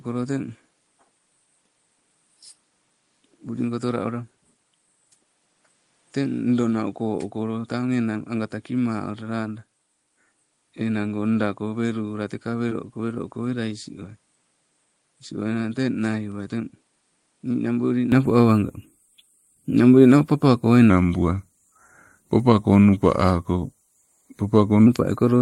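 Speech that opens dull and quieter: from the start to 18.12 s the level sits about 10 dB lower, and a new noise floor lies roughly 40 dB under the signal. This points to an input switched to a poorer device, likely a headset or lesser microphone, and the sound clears at 18.12 s with no gap at the change. A plain low-pass filter would not also shift the level and the background noise. At 12.69 to 12.73 s a short concealed packet loss leaves a brief smear: about 20 ms of audio went missing, and roughly 18 ms of it was filled by extending the preceding sound. Because the gap is bridged, it does not fall silent the way a dropout would. From 20.90 to 24.86 s a section at the wrong speed plays at 0.893 times the original rate, so the sound drags and drops about 2 semitones together. That points to a likely clock or sample-rate mismatch, and the tempo change rules out a simple pitch shift.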